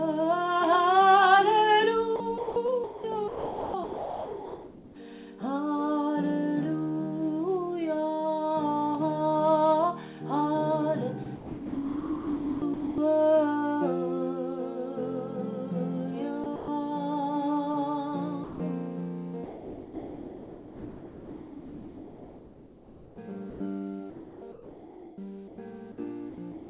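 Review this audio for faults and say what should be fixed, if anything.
The sound gets chopped up in five stretches: 2.16–4.96 s, 11.24–12.98 s, 16.44–16.68 s, 19.44–25.58 s and 26.30 s to the end. Within each, pieces of the real signal give way to a soft hiss and then come back. About 2 s, 1.5 s, 0.14 s, 4.9 s and 0.26 s get swapped out. The likely cause is the sender's voice detector toggling on and off and the far end filling the gaps with comfort noise.

There's also a single 160 ms dropout at 18.44–18.60 s where the sound simply drops out before resuming. That fits sound dropped by the voice detector: it took that moment for background, stopped sending, and the receiver played comfort noise until the detector triggered again.

All of this sits on a narrowband call path with nothing above 4 kHz, which is consistent with G.711.

To fix it, turn off voice activity detection/DTX on the sending side, or at least lower its threshold and add a longer hangover so quiet passages keep being sent.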